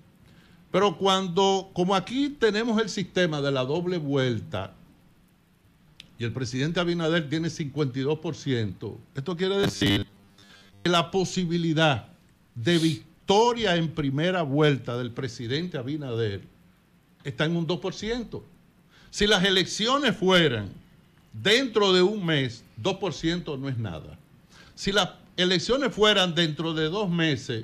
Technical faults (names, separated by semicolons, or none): robotic sound from repeated short buffers